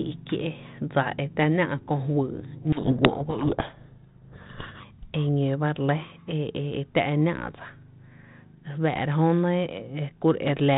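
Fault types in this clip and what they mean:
Codec payload misread: the receiver unpacks the G.726 code words with their bits in the wrong order, so each decoded step comes from scrambled values. From 2.72 to 4.81 s the speech is buried in harsh, rasping distortion until both ends agree again.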